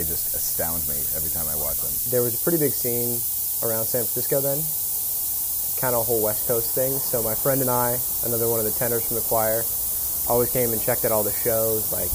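From start to finish the audio shows low bit depth with noise shaping: samples are quantised to about 3 bits, and the rounding error is pushed upward in frequency. The result is a steady, thin hiss, climbing sharply toward the top of the band and sitting about 5 dB above the signal.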